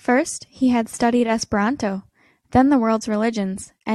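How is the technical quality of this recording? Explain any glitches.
No technical faults are audible.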